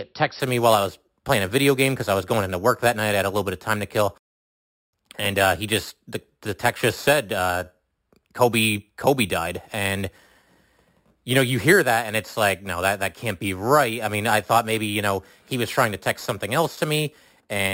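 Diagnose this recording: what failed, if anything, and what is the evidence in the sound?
Imaging from sample-and-hold upsampling, at the sample-rate conversion stage. From 0.40 s to the end, the speech carries a bright metallic fizz that tracks its level. The rate went from 12 kHz to 48 kHz by repeating samples unfiltered, mirroring the spectrum into 6 to 12 kHz at about -15 dB.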